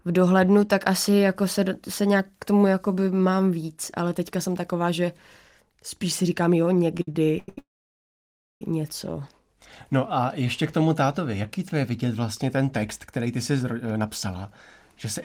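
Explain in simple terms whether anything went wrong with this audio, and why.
Repeated stalls (stutter), 6.95 to 7.58 s: the speech catches six times, gaps up to 89 ms, because late packets kept emptying the receiver's buffer, which briefly stretched the last sound.

Call audio freeze, 7.58 to 8.62 s: the speech stops for about a second, nearly all silence, then resumes where it left off, likely because packets were held up in transit.

Jitter buffer speed-up, 13.18 to 14.46 s: the speech runs about 8% faster at normal pitch, as the receiver trimmed roughly a tenth of a second in tiny pieces to cut built-up delay.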